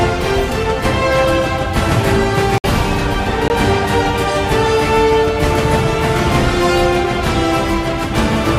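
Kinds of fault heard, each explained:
Block of digital silence: the signal drops to silence with no fade, from 2.58 to 2.64 s (60 ms) and from 3.48 to 3.50 s (20 ms). Unlike a smoothed dropout, the gap is silent and abrupt.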